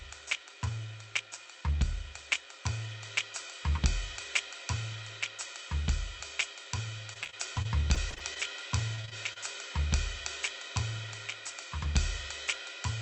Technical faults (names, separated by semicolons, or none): repeated packet loss (robotic sound)